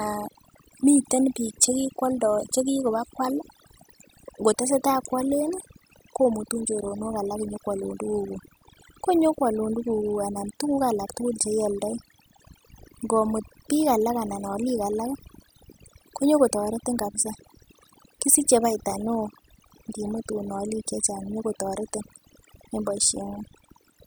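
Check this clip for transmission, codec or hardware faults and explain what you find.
The clip has one fault, present for its whole length: overdone noise removal. A noise reduction stage was set far too aggressively, so any frequency band that sits close to its noise estimate gets pulled right down or switched off, and quieter parts of the speech are cut along with the noise. The background drops and breaks up into twinkling, chirpy specks.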